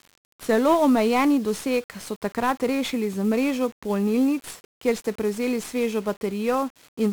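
From start to finish the speech sounds fuzzy and crackly under heavy hiss that buries the treble, the mark of 1-bit DFPWM compression, which fits a roughly 48 kbps stream.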